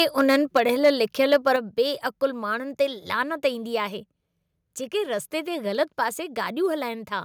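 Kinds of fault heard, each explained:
Microphone overload: at 0.0–0.9 s and 1.32–1.51 s, the loudest peaks clip about 4 dB past the converter ceiling, adding harsh crackle, likely from excessive input volume.
Microphone volume stepped down: at 0.57 s and 1.56 s, the level drops suddenly by about 3 dB, then 6 dB, likely software cutting input gain after clipping.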